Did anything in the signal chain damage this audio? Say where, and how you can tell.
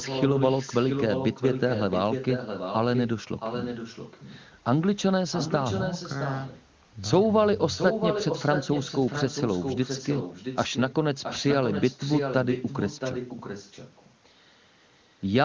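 Yes. An echo leak is heard at 0 to 3.09 s, 3.39 to 4.45 s, 5.31 to 6.64 s, 7.74 to 10.95 s and 11.23 to 14.15 s. A copy trails the speech by 671 ms, somewhat quieter. This is likely a far-end speakerphone whose echo canceller let its pickup back into the call.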